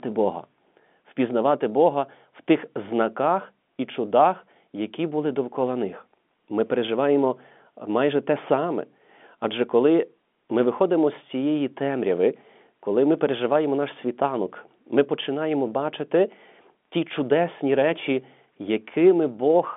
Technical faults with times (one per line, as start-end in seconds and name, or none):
none